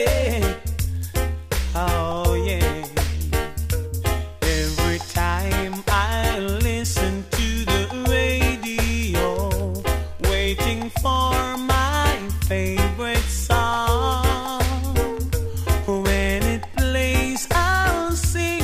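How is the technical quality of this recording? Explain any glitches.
Nothing stood out as a technical problem on listening, and there were no glitches to explain.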